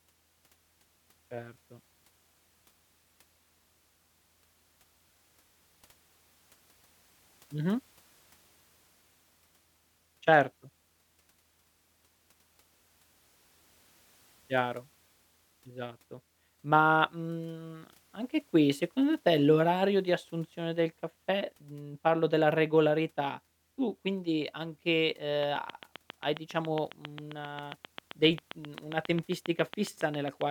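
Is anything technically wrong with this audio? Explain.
Yes, there's a train of clicks from 25.43 to 30.42 s, right after "regolarità tu quindi anche". Around forty near-identical ticks arrive evenly at about 7.4 per second, poking about 10 dB above the speech and through the pauses. It's likely interference or a faulty connection or power supply injecting pulses.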